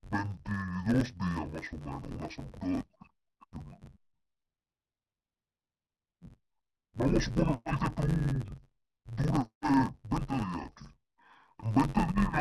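Throughout the speech, interleaved audio is being read as planar: each 10.67 ms block, which fits a 512-sample buffer, has its alternating samples split into halves. With blocks this short, the speech turns dull and robotic, buzzing at about 94 Hz without any clear octave drop.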